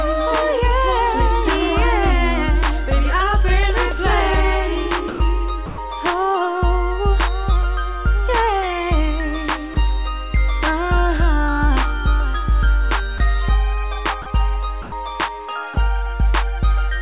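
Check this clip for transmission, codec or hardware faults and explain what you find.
Seven short dropouts are present, all of one kind: sound dropped by the voice detector. They occur at 5.08–5.2 s, 5.66–5.78 s, 9.74–9.76 s, 13.18–13.2 s, 14.22–14.26 s, 14.82–14.92 s and 15.74–15.76 s, lasting from 20 to 120 ms. The likely mechanism is the sender's voice activity detector misjudging low-level sound as background and halting transmission. The receiver then fills each gap with comfort noise, so the sound is briefly replaced by a flat noise bed before cutting back in. Through the call path, which sounds like G.711 mu-law at a rate consistent with 64 kbps, nothing is heard above 4 kHz.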